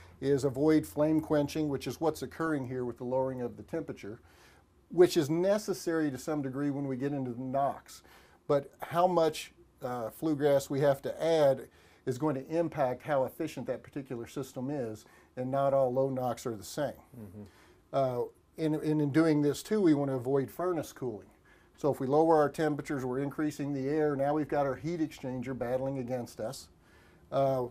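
At 2.46 to 2.50 s there is DAB burbling. Bit errors from weak reception slipped past error correction into the MP2 audio. Damaged sub-bands give short noisy blips.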